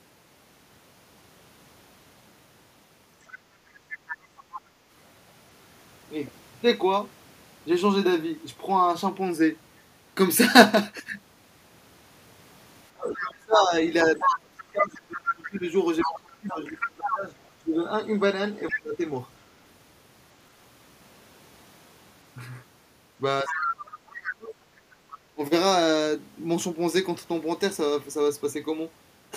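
From 3.22 to 4.61 s a second voice sits under the speech at about 15 dB below it. This is the other side's voice leaking through, likely far-end audio from a loudspeaker that the echo canceller did not fully remove. It is a distinct extra voice rather than the main talker changing.

From 12.94 to 19.02 s there is speech suppressed in double talk. The main talker dips and breaks up for roughly four seconds in total, at worst falling by something like 25 dB. This is likely the echo canceller turning everything down because it could not separate its own talker from the echo. During this stretch, from 13.78 to 17.14 s, the leaked voice comes through at roughly the same level as the talker. A brief scrap of it follows at 18.69 to 18.75 s, a few dB under.

The same pattern returns from 23.43 to 25.41 s, with about a second of suppression and leakage from 23.47 to 24.14 s. What separates suppression from leakage is that the talker's own voice is lost, rather than a second voice being added.

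From 24.83 to 25.07 s the background is gated by the echo canceller. The room sound, not the voice, drops by about 8 dB for a fifth of a second and then returns. A faint leaked scrap follows at 25.1 to 25.18 s.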